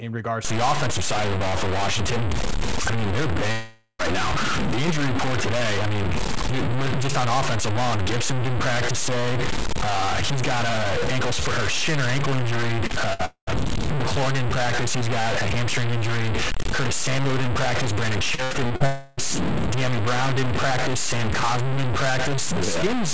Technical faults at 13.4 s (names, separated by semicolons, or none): low bit depth without dither; long network dropout